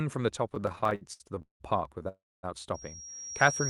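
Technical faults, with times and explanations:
0.49–1.62 s, repeated stalls (stutter): eighteen brief gaps, longest 180 ms, patched by continuing the last sound as packets lag, so the speech drags and stutters.
2.08–2.45 s, call audio freeze: the receiver stretches the last sound, fading to about 250 ms of silence, then resumes where it stopped; a likely network hold-up emptying the jitter buffer.
2.74–3.69 s, loudspeaker feedback squeal: a 5.6 kHz tone swells over the final second, reaching roughly 10 dB above the speech, as the microphone re-amplifies the loudspeaker output.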